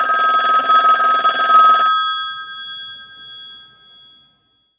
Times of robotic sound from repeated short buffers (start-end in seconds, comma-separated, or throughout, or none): none